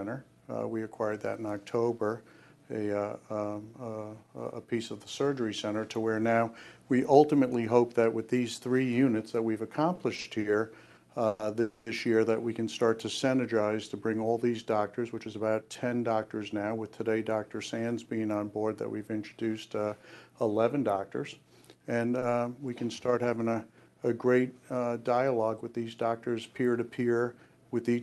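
A run of repeated stalls (stutter) between 9.95 and 10.52 s breaks the sound four times, with about 130 ms of continued sound in total and no gap longer than 40 ms, so about a quarter of that stretch is filler. Packets were arriving late and the jitter buffer kept running empty. On a waveform the envelope goes lumpy and uneven, and a spectrogram shows short smeared patches where the harmonics are held flat instead of moving. Two call audio freezes follow, at 11.27 to 11.41 s (120 ms) and 11.61 to 11.88 s (250 ms). Each one holds the last sound as a buzzy continuation that fades without reaching silence, and the audio then resumes from where it stopped. The likely cause is packets held up in transit, which emptied the buffer. On a spectrogram these show as horizontal streaks that lose energy over time. A jitter buffer speed-up from 15.05 to 16.74 s plays the audio at about 113% speed with the pitch unchanged, trimming around a fifth of a second in many small pitch-period cuts. 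The passage sounds hurried, and the waveform shows whole cycles cut out at tiny splice points. At 22.19 s a short stall from a late packet stretches one sound by 30 ms, which appears as a brief flat smear.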